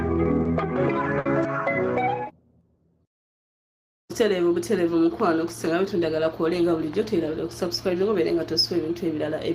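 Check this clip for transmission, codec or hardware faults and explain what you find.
Two transmission faults appear early in the clip, both from packets that never reached the decoder in time.

At 0.43 to 0.47 s there is a short concealed packet loss. About 20 ms of audio went missing, and the receiver patched it by extending the preceding sound before blending back. It is heard as a brief smear or wobble. It is far shorter than the later gap.

At 1.19 to 1.27 s comes a burst of packet loss, where about 60 ms were lost in a row. The concealment stretched the last sound and let it decay, giving a held buzz or fading hiss, and then the audio resumes further on. Its length and fade set it apart from the earlier smear.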